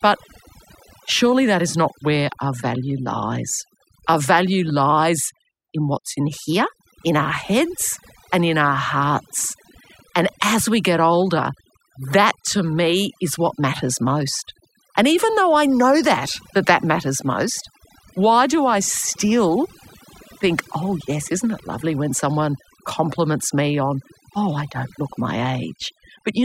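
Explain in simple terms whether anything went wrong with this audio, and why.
Throughout the speech, the pauses drop away and break up into twinkling specks. That is overdone noise removal: a noise reduction tool set too strong shut off frequencies resembling background noise, taking quieter parts of the voice too.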